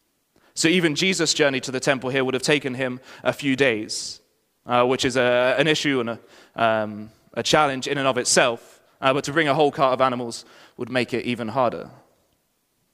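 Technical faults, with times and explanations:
7.98–8.00 s, loud pop: a single sharp pop lands between "um a challenge in" and "and of", peaking a few dB above the speech, which carries on unbroken underneath. That continuity separates it from a dropout or edit click. Likely cause: a voltage pulse from a plug, switch or static.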